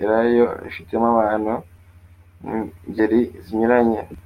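At 2.96 to 3.00 s the speech is interrupted by a short burst of damaged data in a compressed stream, lasting about 36 ms. A stretch of the encoded bitstream arrived corrupted, so the decoder could not interpret the frames at that point, lost synchronisation and had to hunt for the next valid frame header before normal decoding resumed. The result is a brief glitch that does not belong to the speech around it.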